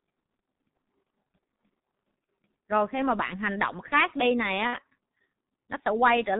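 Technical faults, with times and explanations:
Throughout: G.723.1 codec. The speech is heavily muffled and hoarse, with nothing above 4 kHz and smeared consonants. The 30 ms frames and slowly updated voice model blur fast detail, and the thin sound fits a rate around 6.3 kbit/s.
2.24–2.27 s and 4.67–4.78 s: VoIP packet loss concealed by the speech codec. About 30 ms of audio goes missing at the first spot and about 60 ms at the second, which points to one and then two lost frames. The decoder fills each gap by stretching its last pitch and filter into a buzzy tone or a coloured noise that fades, and because every frame builds on the one before, the sound stays weak and warped for a moment after each gap.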